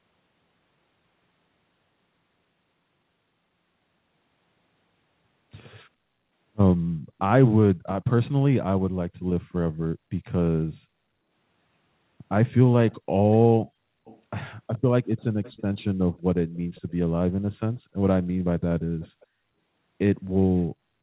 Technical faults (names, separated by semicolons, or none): echo leak